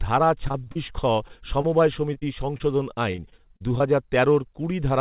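From 0.48 to 0.90 s there is repeated packet loss with robotic sound. Six gaps arrive in quick succession, about 140 ms missing in total and the longest 32 ms. Each gap is bridged by extending the preceding sound, and roughly 29% of the stretch is synthesized fill. The speech turns choppy and mechanical, with fragments dropping out, all within the narrow band of the call path, which carries nothing above 4 kHz, consistent with G.711 mu-law coding.

Short concealed packet loss follows at 1.28–1.31 s, 1.61–1.66 s, 2.14–2.17 s, 2.19–2.23 s and 2.57–2.62 s. Each is about 20 ms of audio that arrived too late to decode. The receiver papers over the hole by continuing the last pitch or noise shape and then crossfading back. Each one is heard as a brief smear or wobble.

From 3.12 to 3.83 s, repeated packet loss with robotic sound returns. Seven gaps total about 160 ms, the longest 38 ms, and around 20% of the span is concealment. 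It is less dense than the first burst but spread over a longer stretch, giving the same choppy, stuttering quality with pieces of the speech missing.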